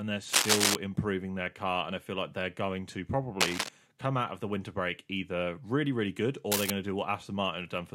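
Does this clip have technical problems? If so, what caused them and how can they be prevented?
Yes. Three bursts of cable scratch noise ride over the speech: from 0.32 to 0.76 s, somewhat louder than the speech, just before "improving their car"; from 3.41 to 3.69 s, after "like they're going to"; and from 6.52 to 6.71 s, after "either really really good", both roughly level with the speech. The likely cause is a worn cable or connector being moved, so its contact resistance jumps about rapidly. Unlike a single click or low handling thumps, each burst is a dense, uneven crackle lasting a fraction of a second. Replacing or cleaning worn cables and connectors, and keeping them still while recording, prevents it.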